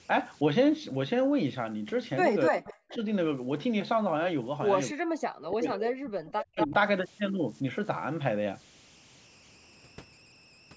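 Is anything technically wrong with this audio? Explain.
Yes. Three kinds of fault can be heard in this speech.

Converter idle tones run throughout. An undithered delta-sigma converter settles into repeating bit patterns on low-level input, and here that produces a whistle around 3 kHz, about 29 dB below the speech, most audible in pauses and as grit under quiet passages.

Speech suppressed in double talk occurs at 2.5 to 2.6 s, 2.91 to 3.05 s, 4.93 to 6.22 s and 6.54 to 6.73 s. The likely cause is an echo canceller that could not separate the talker from loudspeaker echo while both sides spoke, so it turned the line down. The speech drops by roughly 40 dB in the first and third spans, about 25 dB in the last, and only about 5 dB at 2.91 s.

Echo leak appears at 2.64 to 2.98 s, with a delayed copy of the speech arriving 288 ms late at about 20 dB down. It appears again at 6.26 to 6.74 s, 237 ms late and only about 5 dB below the speech. 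Both are likely residual loudspeaker pickup that the loudspeaker side's canceller failed to remove and sent back.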